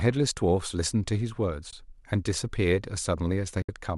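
A speech clip with two brief, soft-edged dropouts, at 1.71 to 1.73 s and a longer one at 3.62 to 3.69 s, fading out and back in. This is AAC frame loss with muting: missing frames were zeroed, leaving gaps of about 20 ms and 70 ms that the overlapping windows smooth at the edges. The light coding texture throughout is likely from low-delay AAC compression.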